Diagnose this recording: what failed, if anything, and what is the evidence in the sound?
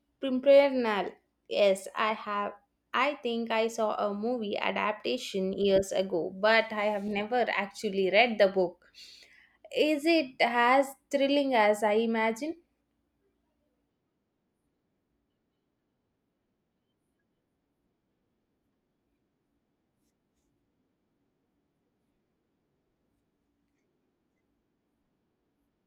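Nothing in this speech recording points to a failure at any stage of the signal chain. There is no event in the sound that calls for a stage-by-stage diagnosis.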